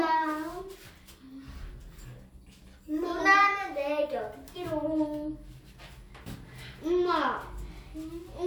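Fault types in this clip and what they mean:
Nothing in the sound stood out as a technical problem on listening.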